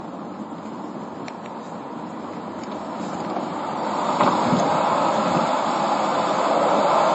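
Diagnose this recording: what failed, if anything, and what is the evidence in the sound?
The failure sits at the codec stage and runs the full length of the clip. Nothing is present above 7.7 kHz, and smeared, warbling artefacts of two different characters sit together in the audio. This is likely transcoding between lossy codecs: the sound points to a low-rate MP3 pass and then a later HE-AAC encode. The second codec spent its bits re-encoding the first codec's damage and added its own. A spectrogram would show a hard ceiling at 7.7 kHz with patchy, holed texture beneath it.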